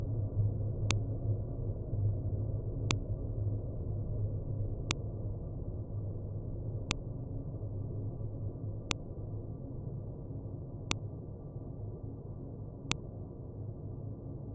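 A sharp, loud click lands at 0.91, 2.91, 4.91, 6.91, 8.91, 10.91 and 12.92 s, spaced 2.0 s apart. This is a file header played as audio. The stream was assembled from 2-second pieces whose headers were never stripped, so each piece's leading bytes are decoded as sample values. These arbitrary values form a brief spike that snaps out of the audio at every join, independent of the surrounding material.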